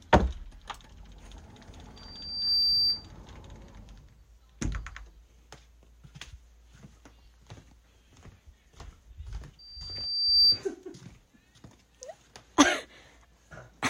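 Loudspeaker feedback squeal shows up twice, at 1.96–3.12 s and 9.59–10.63 s: the mic catches its own speaker, the loop runs away at 4.7 kHz, and a thin tone swells over roughly half a second the first time and 0.7 s the second to well above the sound, louder the second time.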